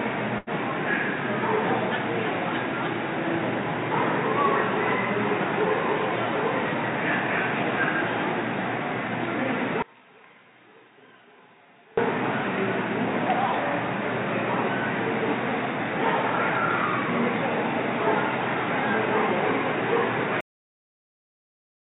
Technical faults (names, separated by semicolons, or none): short stall from a late packet; one channel inverted; cut-off end